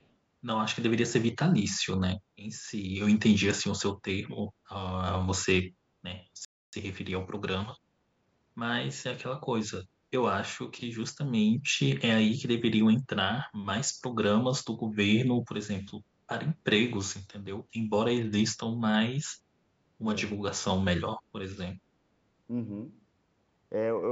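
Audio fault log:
0.02–0.06 s, echo leak: a very faint delayed copy of the speech, around 40 dB below the main level, arrives about 411 ms after the original it repeats. A short scrap like this is most likely residue from a far end that plays the call over a loudspeaker, where the echo canceller failed to fully subtract what its microphone picked up. The leftover was sent back down the line a fraction of a second late.
6.45–6.73 s, playback stall: the speech cuts out mid-flow and the output goes silent for about 281 ms before resuming. The most likely cause is that the player ran dry of incoming data, or its audio thread was held up, leaving nothing to send to the output until the supply recovered.
6.73–8.59 s, time-compressed catch-up: right after the stall the speech runs about 1.15 times faster than normal while keeping its ordinary pitch, so it sounds hurried rather than chipmunk-like. 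The player is working off the backlog that built up during the gap by trimming small slices out of the audio and cross-fading across the joins, until playback is back in step.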